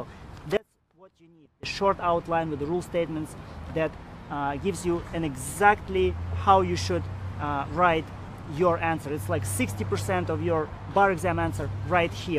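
From 0.57 s to 1.63 s the audio nearly vanishes. It drops by about 28 dB, then returns at full level. The background goes with it, so the gap sounds almost empty. What remains is only a small residue of the sound. The likely cause is one channel inverted. A stereo source with one side flipped in polarity was folded to mono. The shared content cancelled, leaving just the difference between the two sides.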